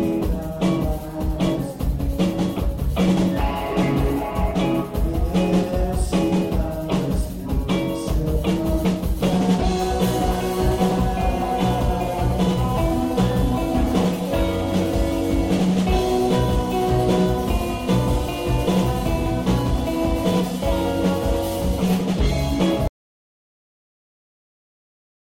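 The sound cuts off abruptly at 22.88 s and never returns, leaving about 2.5 s of silence through to the end. This is an audio dropout to silence, likely from the input signal being lost while the recorder kept writing zeros. What sets it apart from a fade-out, a noise gate closing or a natural pause is the instant cut mid-flow and the complete lack of room tone or noise floor in the gap.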